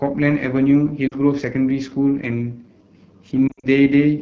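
Throughout, the speech carries the rough, raspy texture of the AMR wideband (HD Voice) codec. It extends past narrowband, but the band above 6.4 kHz is only shaped noise. The plainly audible grain, rather than simple dullness, fits the low 8.85 kbit/s mode. At 1.07 to 1.17 s, lost AMR speech frames cause a brief warble where the decoder repeats its last pitch and tract settings. That is roughly two 20 ms frames. From 3.48 to 3.68 s, losses scattered over about 160 ms, with runs up to 60 ms, smear and fade the sound rather than cutting it with a hard gap.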